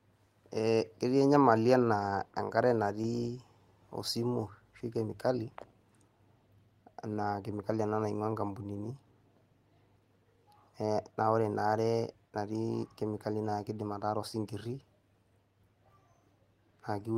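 No technical faults can be heard anywhere in this recording.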